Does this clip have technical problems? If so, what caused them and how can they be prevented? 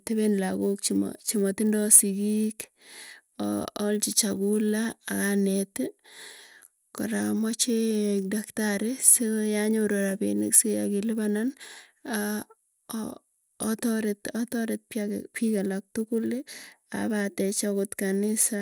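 Yes. The sample-rate converter was restarted on every block, which fits a 24 kHz to 48 kHz upsample done in 10 ms chunks. Each chunk was processed on its own, so at every edge the converter lacked the true neighbouring samples and left a small error. Across the whole clip these errors recur at 100 Hz, too fast to hear as separate ticks, so they merge into a buzz that sits under the speech and stops in the pauses. To prevent it, run one continuous resampler instance that keeps its filter state from block to block.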